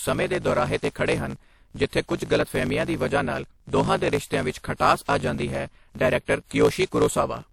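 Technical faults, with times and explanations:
throughout, block size mismatch (truncated): each block's end is dropped, so there's a 54.4 Hz buzz and speech runs 1.16 times fast; fits 1024-sample writes.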